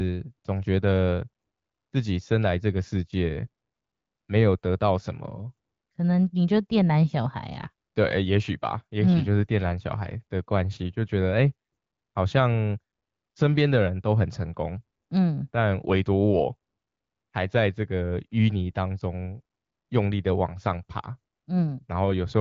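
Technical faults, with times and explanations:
The speech carries through an AMR wideband (HD Voice) path at 12.65 kbit/s, a rate at which that codec keeps speech clear, leaving only light coding damage and no technical faults.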